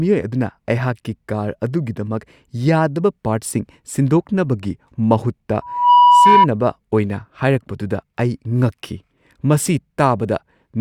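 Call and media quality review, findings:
Loudspeaker feedback squeal, 5.61 to 6.47 s, right after "ꯁꯤꯟꯗꯣꯛꯅꯕꯒꯤ ꯃꯍꯨꯠꯇ". Single 980 Hz tone swells over about a third of a second to roughly 10 dB above speech. Probable component: open mic picking up its own loudspeaker; loop gain exceeds unity at 980 Hz.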